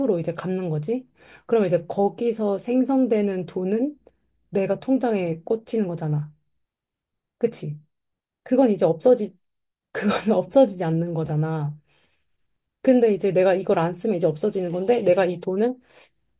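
No technical faults can be heard anywhere in this speech recording. There are no events to place in time, so nothing here needs a timestamp or an explanation.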